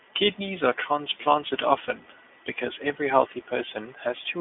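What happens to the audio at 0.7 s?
At 0.7 s the speech is passing through the iLBC codec, which affects the whole clip. Each 20 ms frame's excitation is coded on its own, so the speech sounds clearly rough and synthetic, which fits the 15.2 kbps mode. The line band runs from 250 Hz to 3.5 kHz. On a spectrogram, energy stops at a flat ceiling near 3.5 kHz and thins below 250 Hz.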